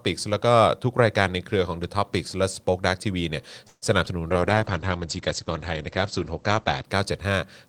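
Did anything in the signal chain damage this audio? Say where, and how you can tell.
Yes, the damage comes from the network and codec stages of the call. A call audio freeze runs from 3.67 to 3.84 s. The last sound is stretched into a fading buzz ending in about 30 ms of silence. The likely cause is packets stalling until the jitter buffer ran dry. About 145 ms of fill pushes everything later. On a spectrogram this shows as smeared, flattened harmonics decaying into a blank strip.

Short concealed packet loss occurs at 4.06 to 4.08 s. About 20 ms of audio never arrived, and the decoder bridged the gap by extrapolating from the preceding signal before blending back in. It is heard as a brief smear or wobble. The waveform shows a short, too-regular stretch at that point.

A call bitrate drop begins at 4.32 s and lasts to 6.91 s. The encoder fell from 32 to 12 kbps and stayed at its lowest for about 2.5 s, so the sound turns muffled and watery. 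On the spectrogram the content above 8 kHz vanishes, whereas before the drop it reached 20 kHz. The remaining band looks blotchy.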